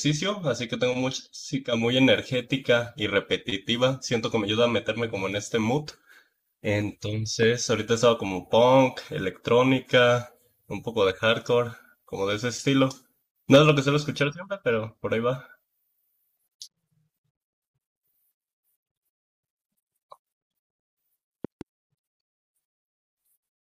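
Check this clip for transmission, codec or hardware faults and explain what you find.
Three faults are present: two loud pops and one short stretch of hard clipping.

From 7.43 to 7.45 s there is a single loud pop, roughly ten dB above the speech. From 21.45 to 21.63 s there is a double pop, about 5 dB above it. Each is a sharp thump over continuing speech, likely from a voltage pulse such as static or a switching transient.

From 13.53 to 13.70 s there is hard clipping. The signal drives about 4 dB past the stage's limit, so the peaks are sliced flat. The flattened tops add high harmonics, heard as a brief harsh crackle on the loudest part of the speech.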